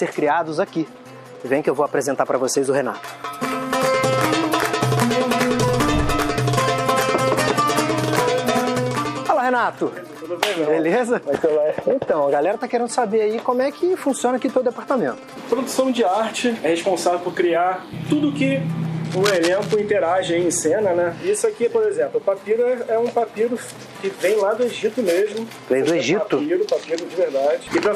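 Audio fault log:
19.05–19.80 s, cable scratch noise: for about three quarters of a second a dense, irregular rasp of noise rides over the sound, fairly prominent at roughly 10 dB below it. This is likely a worn cable, plug or control being moved, its contact resistance jumping about as it shifts. Unlike isolated digital clicks or a dropout, the bursts are clustered and uneven.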